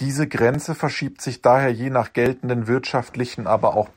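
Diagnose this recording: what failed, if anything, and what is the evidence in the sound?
Driver or buffer stage: new audio missed its deadline twice, so the last tiny block of speech was replayed as a repeated buffer. Each block lasts about 1.3 ms, which fits a 64-sample buffer. At 0.54 s, just before "verschiebt sich daher je", it plays three times, and at 2.26 s, after "sich daher je nach", twice. Each is heard as a brief click, with essentially nothing lost.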